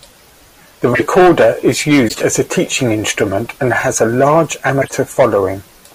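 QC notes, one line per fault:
0.93–1.02 s, corrupt frame decoded: a glitch lasting about a tenth of a second, as a handful of damaged codec frames played with misread gains and codes, throwing energy into the wrong frequencies.
2.04–2.21 s, corrupt frame decoded: a longer glitch just before "as a teaching instrument", spanning several bad frames.
4.81–4.92 s, corrupt frame decoded: a loud glitch right after "and has a large", again from a few corrupted frames decoded anyway.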